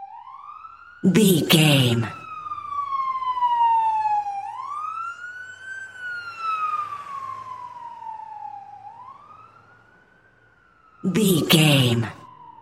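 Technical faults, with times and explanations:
4.08–4.59 s and 10.86–11.39 s, zipper noise: the level drops, then rises, by around 10 dB in unsmoothed steps, about fifty a second, so each step clicks into a buzzing zip.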